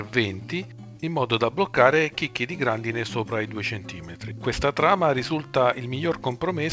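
No faults can be heard anywhere in this audio.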